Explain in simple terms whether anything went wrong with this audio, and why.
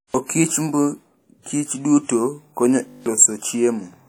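Throughout the speech there is plainly audible ringing, washy damage with hiss that rises and falls with the sound, likely from WMA compression squeezing the audio too hard.

From 2.88 to 3.06 s a steady buzz replaces the speech. This is a system hang loop: one 20 ms snippet repeated nine times at 50 per second, losing about a fifth of a second.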